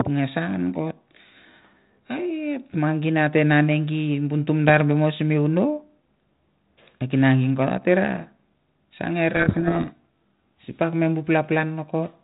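From 9.34 to 9.97 s the speech is buried in harsh, grinding distortion, a codec payload misread: the G.726 code words arrive with their bit order reversed, so the decoder rebuilds wrong sample differences. Unlike the steady, level-following hiss of low-bitrate G.726, heard only faintly elsewhere at 32 kbit/s, it starts and stops abruptly.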